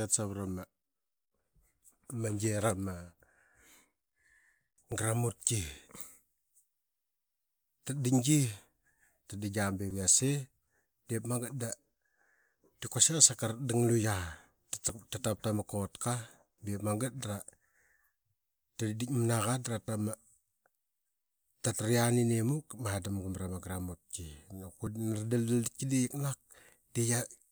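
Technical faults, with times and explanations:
4.92, 9.91, 14.89, 19.88 and 24.87 s, audio missing between chunks: the speech skips forward by a tiny amount, around 15 ms each time, at a steady spacing of about 5 s. The likely cause is a recorder or processor handling the audio in 5 s blocks and dropping a short slice at each changeover. The two sides are butted together with no gap, so the jump registers as a brief hitch in the speech flow rather than a pause.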